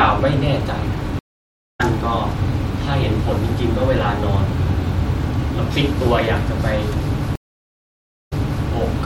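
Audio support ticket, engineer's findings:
Stream reconnect at 1.19–1.81 s: 522 ms dropout, then the speech picks up about half a second further on. Link dropped, player rejoined the live feed with a fresh decoder, soft first frames. Missed material skipped.

Stream reconnect again at 7.36–8.65 s: 878 ms gap, resumes 418 ms earlier, so a short stretch of speech repeats. Server likely resent a buffered burst on reconnect; new decoder fades in.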